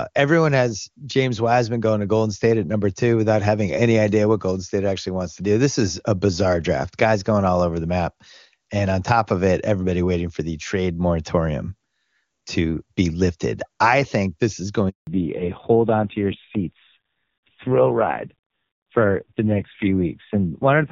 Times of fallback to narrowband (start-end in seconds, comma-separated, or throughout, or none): 15.07-20.91